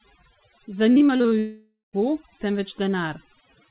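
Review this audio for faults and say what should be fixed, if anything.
Throughout the clip the background drops and breaks up into twinkling, warbling specks. This is overdone noise removal: the suppressor pushes individual frequency bands down whenever they resemble its noise estimate, taking the quieter parts of the speech with them. Set the noise reduction to a gentler strength, or let more residual noise through, so speech detail survives.

From 0.92 to 1.33 s the speech turns choppy, with pieces missing. This is repeated packet loss (robotic sound): about six short holes, the longest around 40 ms, are each patched by stretching the previous sound, so roughly a third of that stretch is filler. Stabilise the network link or enlarge the jitter buffer so fewer packets arrive too late.

From 1.39 to 1.95 s the sound smears into a fading continuation of the last sound, then drops to silence for about 150 ms before speech resumes with a piece gone. 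This is most likely a long network dropout, where the receiver extends the last sound until it gives up. Improve connection reliability, for example with a wired link or loss-tolerant redundancy, to prevent such outages. The narrow band, with nothing above 4 kHz, comes from the G.711 call codec.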